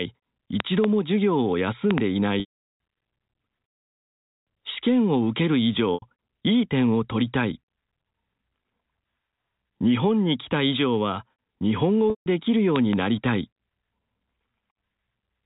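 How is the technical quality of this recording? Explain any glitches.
There are two kinds of trouble here: a few loud pops and some dropouts. It all comes through a phone-style narrowband channel, with nothing above 4 kHz.

The loud pops come as double pops at 0.60 to 0.86 s, 1.91 to 2.00 s and 12.76 to 12.95 s. They peak roughly 20, 15 and 20 dB above the speech. Each is a sharp thump-thump sitting on top of the talking, which carries on underneath. The likely cause is a voltage spike from a switch, static or a driver hiccup.

The packet loss with pitch repetition hits at 2.40, 5.94 and 12.10 s, with gaps of about 400, 80 and 160 ms. The receiver patched each gap by looping the last pitch cycle and fading it out. The 80 ms one sounds like a brief buzzy hold. The longer ones fade into silence before speech cross-fades back in. The gap sizes fit 20 ms packets.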